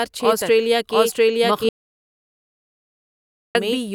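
Speech recorded with a doubled audio track throughout: a second, equally loud copy trails the original by roughly 0.7 s, likely from a slower parallel capture path. An audio dropout to silence runs from 1.69 s to 3.55 s, leaving about 1.86 s of silence with no room tone, likely a lost input connection.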